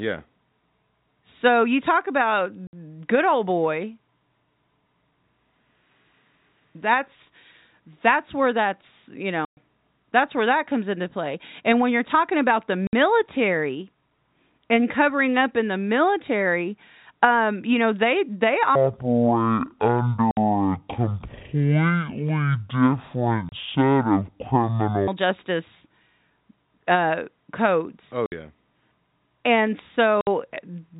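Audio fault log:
2.67 to 30.27 s: packet loss filled with silence. Hard-edged gaps at 2.67, 9.45, 12.87, 20.31, 23.49, 28.26 and 30.21 s, lasting 30 to 120 ms. All are multiples of 30 ms, which fits 30 ms packets replaced by silence.
18.75 to 25.08 s: section at the wrong speed. It plays at half speed, so it sounds slow and deep, roughly ten semitones low, likely from playback against the wrong clock.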